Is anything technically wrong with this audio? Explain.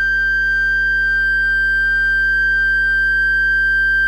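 Yes. Mains hum runs throughout the music: a steady 50 Hz tone with low harmonics, sitting roughly 15 dB below the signal, from power-line coupling through a ground loop or transformer.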